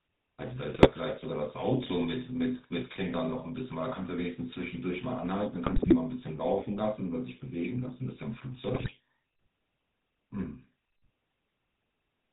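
A speech recording passed through the GSM full-rate codec, with the buzzy, gravelly texture typical of that coder. It models the vocal tract as a filter excited by regularly spaced pulses, keeping only one excitation sample in three, and the plainly audible roughness fits its 13 kbps mode. Nothing above 4 kHz survives, so the sound is dull and band-limited, and sibilants lose their edge. GSM bit errors also break through in three bursts: 0.74 to 0.88 s, 5.66 to 5.97 s and 8.74 to 8.92 s. In each, the speech turns to squawks, pops and gargling as corrupted filter, pitch and gain parameters reach the decoder, bending the spectrum or spiking the level frame by frame. The middle burst is longest, pointing to roughly a dozen damaged frames, against a handful in the other two. The density of the damage suggests a few percent of the bits were flipped on a weak radio link.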